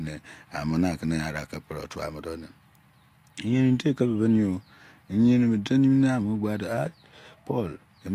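At 5.96 s a channel delay sets in and lasts to the end of the clip at 8.15 s. One channel runs late by roughly a single sample, about 0.02 ms. When the two are folded to mono, the shared speech partly cancels itself. With so tiny an offset, the first notch falls near 20 kHz. So the comb filtering shows up as a soft loss of air at the very top. The speech turns slightly dull rather than hollow.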